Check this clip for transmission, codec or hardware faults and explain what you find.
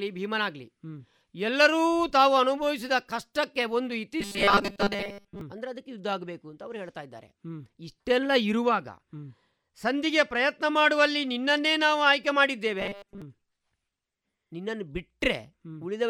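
Two stretches of robotic sound from repeated short buffers, from 4.21 to 5.41 s and from 12.80 to 13.22 s. The speech collapses into a rigid metallic buzz at 200 Hz, likely from audio arriving too seldom, so each 5 ms chunk is replayed over most of the time while real audio is skipped. A spectrogram shows flat, evenly spaced harmonic lines at multiples of 200 Hz. The waveform shows identical repeating 5 ms cycles.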